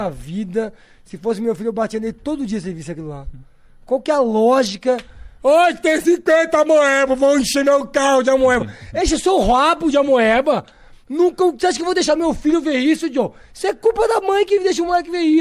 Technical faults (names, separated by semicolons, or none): none